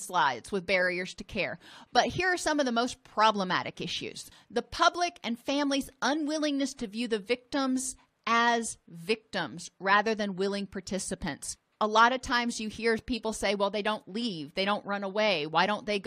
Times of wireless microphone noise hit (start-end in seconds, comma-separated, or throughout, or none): none